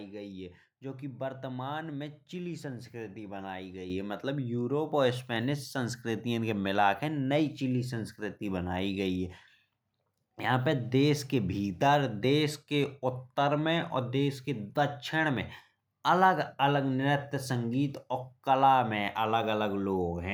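A speech clip with one fault, a microphone volume stepped up at 3.9 s, between "में चिली संस्कृति बनाई" and "है मतलब यूरोप और". Voice and background rise together by about 8 dB in a single step, as the call software raised the device's input volume after judging it too quiet.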